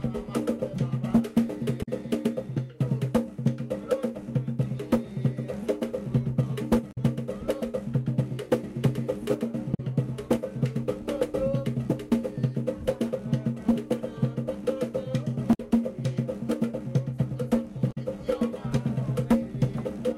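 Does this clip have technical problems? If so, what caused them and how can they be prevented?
Yes. Damaged data in a compressed stream causes five short blips, each lasting about 65 ms, at 1.82–1.88 s, 6.91–6.98 s, 9.74–9.80 s, 15.53–15.60 s and 17.91–17.97 s. Corrupted bytes make the decoder misread frames and lose sync until it finds the next frame header. On a spectrogram, each appears as a narrow vertical smear of broadband energy. On a waveform, it shows as an abrupt, jagged discontinuity. Checksummed transfers, verified storage and error-protected streaming prevent this corruption.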